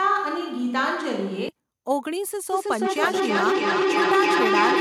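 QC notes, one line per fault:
0.00–1.49 s, switch to a distant microphone: already under way as the clip opens, this stretch likely comes from a farther pickup rather than the close microphone. Speech sounds roomy and hollow, thinner in the bass, at much the same level, with background noise well below the speech.
2.53–4.80 s, feedback howl: a microphone-to-loudspeaker loop gains level on each pass, so repeats build instead of dying away. They narrow to a tone around 400 Hz, the loop coming round roughly every 0.3 s, peaking about 3 dB above the speech and running to the end.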